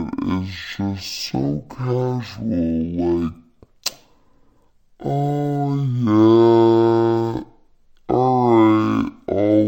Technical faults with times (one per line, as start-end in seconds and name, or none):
0.00-9.67 stereo read as mono